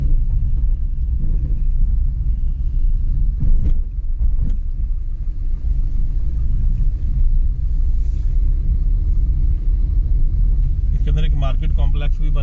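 Nothing here trips any alarms: there are no technical faults to point to anywhere in the audio.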